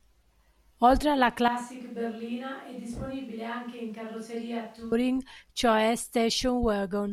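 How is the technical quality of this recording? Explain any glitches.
The recording has one clear glitch. From 1.48 s to 4.92 s the speech suddenly turns roomy and hollow, loses its low end, drops about 10 dB in level, and carries more background noise, sitting roughly 30 dB below the speech. At 4.92 s it snaps back. This is likely a switch to a distant microphone: the close mic dropped out, so a farther one picked up more room reflection and ambience and less direct bass.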